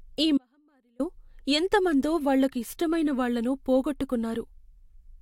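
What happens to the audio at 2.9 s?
Nothing goes wrong at 2.9 s; the speech runs on intact through that moment.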